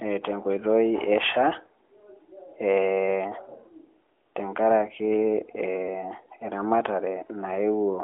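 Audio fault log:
No faults found; the speech sits on an AMR narrowband mobile path limited to a 300 Hz to 3.4 kHz line band with nothing above 3.6 kHz, consistent with the 12.2 kbps mode.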